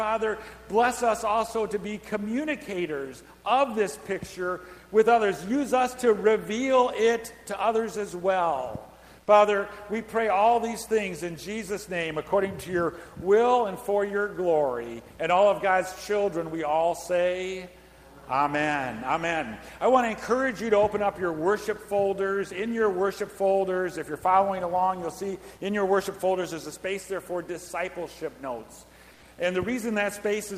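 From 29.14 to 29.22 s, the background gives way to a flat, textureless hiss for about 80 ms, its detail gone and its level dropping by about 2 dB against a background that sits about 30 dB below the loudest passages. This is comfort noise in place of the background, likely from Opus-style discontinuous transmission: the sender paused its stream during what it judged to be silence, and the receiver filled the gap with synthetic noise roughly matched to the background.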